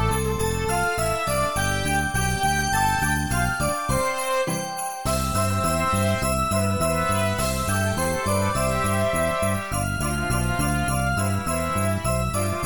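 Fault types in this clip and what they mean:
There are no fault types in this clip.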